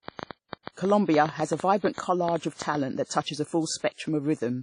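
From the first moment to the end, the speech has a smeared, watery texture with a dulled top end, and two kinds of compression artefact are layered on each other rather than one clean signature. This is likely transcoding between lossy codecs: the sound fits a low-rate WMA stage near 32 kbit/s feeding an AAC-LC encode at 64 kbit/s. The second encoder spent its bits re-coding the first one's damage, and the narrower bandwidth from the WMA stage remains.

From 0.09 s to 2.76 s, a train of clicks ticks over the speech and through its pauses. There are around twenty sharp, similar pops at an uneven pace averaging 7.1 per second, with the loudest standing roughly 10 dB above the speech. They stop just before "that touches a". Pulses this regular in shape suggest a likely cause of electrical interference or a faltering interface repeatedly injecting a spike into the signal.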